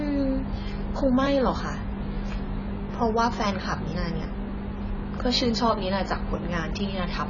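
Speech with AAC compression damage throughout, most likely from AAC-LC coding at a very low bitrate, which fits roughly 16 kbps. Nothing remains above 7 kHz, so the sound is dull, and heavy quantisation smears the remaining spectrum into a warbling, fizzy texture.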